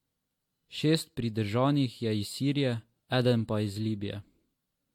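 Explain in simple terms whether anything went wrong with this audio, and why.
Generation loss, likely from re-saving the speech in a compressed format about four times, leaves it swirly and hollow throughout, with sharp sounds blurred.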